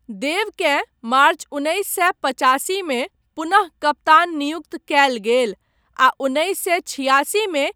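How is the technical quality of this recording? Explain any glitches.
No technical glitches are audible.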